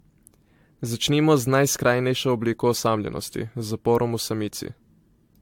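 From start to finish the speech carries generation loss. It has that swirly, hollow, smeared quality you get when audio has been through a lossy coder several times, and consonant attacks come out blurred. The likely cause is repeated AAC-LC encoding at around 96 kbit/s, something like four passes, each re-quantising on a shifted frame grid so the noise and spectral holes stack up. Nothing comes through above 19.1 kHz.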